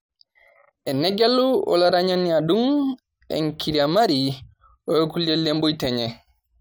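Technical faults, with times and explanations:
Nothing technical goes wrong anywhere in this speech clip.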